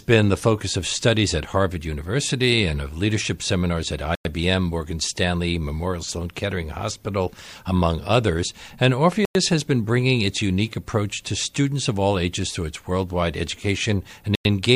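At 4.15, 9.25 and 14.35 s the sound drops out for 100 ms: a gap between chunks. The audio arrived in 5-second pieces with silence inserted at every join, so nothing's missing, just interrupted on a steady beat.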